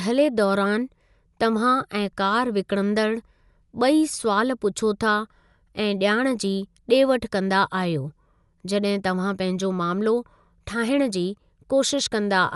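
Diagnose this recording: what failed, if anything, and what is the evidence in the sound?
The failure sits at the codec stage. Throughout the speech, nothing reaches above 11.5 kHz, so it sounds dull. A rough, fluttering noise hangs around tonal parts. The likely cause is Dolby Digital compression at a starved bitrate, which fits about 64 kbps.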